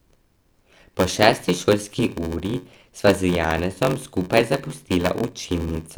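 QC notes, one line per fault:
throughout, block size mismatch (padded): a steady 93.8 Hz buzz rides on the speech, which runs at 0.861x speed with near-normal pitch. Each block, which fits a 512-sample read, is topped up with zeros. The waveform shows a flat gap every 10.7 ms, and the spectrogram shows evenly spaced vertical stripes.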